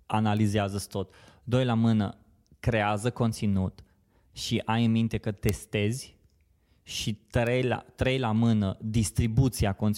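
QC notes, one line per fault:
0.37 s, 5.49 s, 7.47 s and 9.25 s: bit error spikes. Each is a single-sample jump where one flipped bit throws the value off by a power of two and snaps straight back, so you get a sharp, broadband tick. The loudest is at 5.49 s right after "ai în minte că", peaking at about -3 dBFS. The others are at about -22, -15 and -28 dBFS, with the 7.47 s one just before "la trei la mână" and the 9.25 s one just after it.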